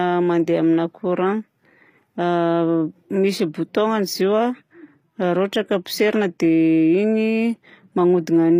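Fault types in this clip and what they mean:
HE-AAC compression: Throughout the speech the damage is plainly audible, and it points to HE-AAC coding at a low bitrate, likely near 24 kbps. Only the lower spectrum is properly coded; the treble is rebuilt by copying lower bands upward under a coarse envelope, so upper harmonics fail to line up with the real ones. The top is synthetic rather than the original, s sounds turn gritty or lispy, and nothing is present above 15.5 kHz.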